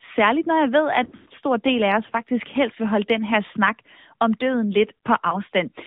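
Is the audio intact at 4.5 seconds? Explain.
No. At 4.5 seconds the speech is still passing through the AMR narrowband mobile codec, which affects the whole clip. The codec rebuilds the speech from a compact vocal-tract model driven by a few pulses per frame. Here it leaves a band of only 150 Hz to 3.7 kHz, and the degree of damage points to a mid-rate mode of roughly 10 kbps. The result is dull, boxy telephone speech with a plainly audible buzzy, synthetic edge.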